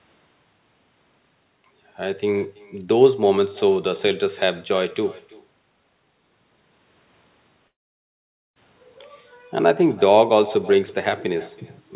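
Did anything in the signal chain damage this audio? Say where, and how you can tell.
Yes. At the call-processing stage, echo with no canceller runs through the whole clip: every phrase is followed roughly 0.3 s later by a thin copy about 22 dB quieter. Room reverberation would smear into a decay, but this is a distinct delayed repeat of the far end's loudspeaker.

At the network stage, a long network dropout runs from 7.68 to 8.59 s. The last sound stretches into a fading buzz, then near-silence, and the audio resumes with that stretch missing. The likely cause is lost packets. A brief packet-loss click would not erase almost a second.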